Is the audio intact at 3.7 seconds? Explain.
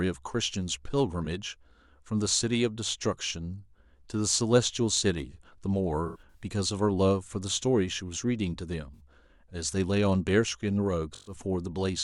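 Yes, the speech at 3.7 seconds is intact, with no dropout, click, distortion or other fault at that moment.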